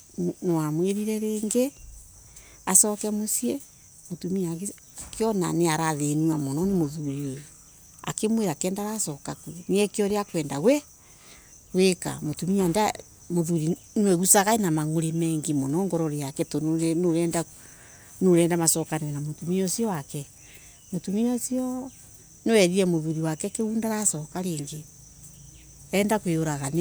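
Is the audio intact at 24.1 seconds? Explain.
Yes, the speech at 24.1 seconds plays through intact, with no dropout, click or other fault at that point.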